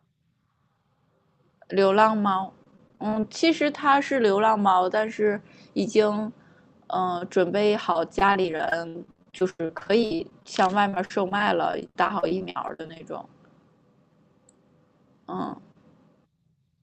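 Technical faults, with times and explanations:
2.58–3.44 s, repeated packet loss (robotic sound): about a dozen short dropouts arrive in quick succession, the longest 30 ms. Each is bridged by stretching the preceding sound, so roughly a fifth of this span is synthetic fill and the speech turns choppy.
7.92–13.00 s, repeated packet loss (robotic sound): a longer run of about 55 gaps, the longest 96 ms, with around a quarter of the span concealed, roughly 1.3 s in total. The longer repeats of earlier sound leave choppy speech with pieces missing over the band-limited 8 kHz Opus call audio.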